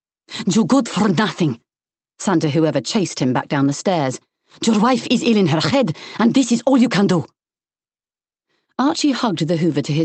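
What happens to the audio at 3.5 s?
Nothing goes wrong at 3.5 s; the audio passes through intact, carrying only the ordinary coding character of the Opus call path, which limits the band to about 8 kHz.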